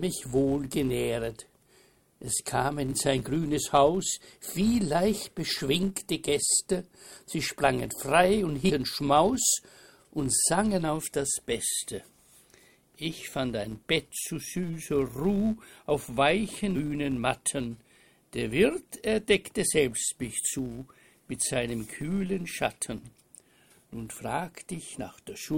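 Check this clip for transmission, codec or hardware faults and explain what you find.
Two faults are present: a continuous block-rate buzz and a single short glitch from corrupted compressed data.

Throughout the clip there is a filter restarted on every block. A filter in the chain drops its internal state at each block boundary and starts again from zero, so every block opens with a small transient. These repeat at about 172 Hz, which fits a 256-sample block at 44.1 kHz. The result is a steady buzz whose loudness rises and falls with the level of the audio.

From 8.69 to 8.71 s there is damaged data in a compressed stream. The bytes in that part of the stream are wrong, so the decoder cannot read those frames correctly and loses sync until it finds a valid frame header. This is heard as a brief chirp or blip lasting about 20 ms.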